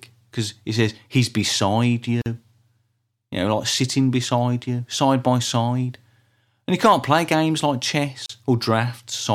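At 2.22 s and again at 8.26 s, the speech drops out briefly, for about 44 ms and 34 ms: a gap at a join of encoded pieces. Separately encoded segments, joined 6 s apart, keep their untrimmed encoder delay and padding. Each gap shows as a full-height blank column with smeared edges.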